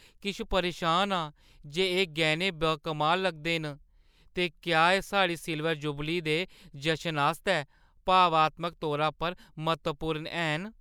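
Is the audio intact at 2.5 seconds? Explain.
Yes, the speech at 2.5 seconds comes through intact, with no dropout, click, distortion or other fault at that moment.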